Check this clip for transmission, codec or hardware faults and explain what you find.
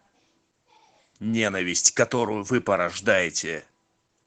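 One codec fault runs through the whole speech clip: Opus voice compression at a low bitrate. The encoder is working in its SILK linear-prediction mode with the band capped at 8 kHz, and the coarse detail is consistent with roughly 12 kbps in 20 ms frames. With so few bits, the excitation signal is quantised crudely and everything above 8 kHz is discarded. The voice therefore sounds plainly muffled, hoarse and slightly robotic from start to finish.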